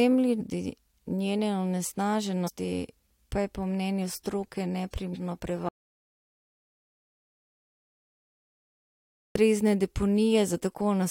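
Damaged data in the compressed stream at 0.40 s, 2.46 to 2.49 s and 5.13 to 5.16 s gives brief glitches as the decoder misreads corrupted frames and loses sync. An audio dropout to silence runs from 5.69 to 9.35 s, about 3.67 s of silence with no room tone, likely from the input being lost while recording continued.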